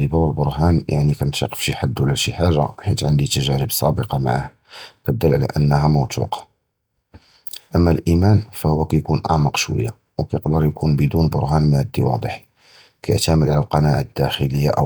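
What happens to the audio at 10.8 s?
Nothing goes wrong at 10.8 s: the audio there is intact, with no dropout, click, distortion or other fault at that moment.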